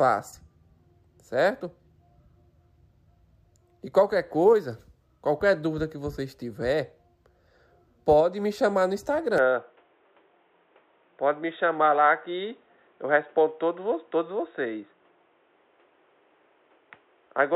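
At 9.38 s the sound turns dull and boxy through to the end, likely an input switched to a poorer device. A spectrogram shows a hard ceiling at 3.8 kHz. The waveform shows no gap or level jump, just a faint new noise floor about 40 dB down.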